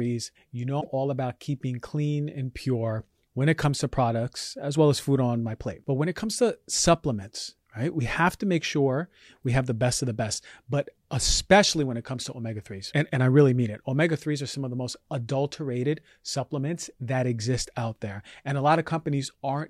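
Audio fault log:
0.77–0.87 s: damaged data in a compressed stream. Corrupted frames make the decoder lose sync and hunt for the next header, producing a brief glitch.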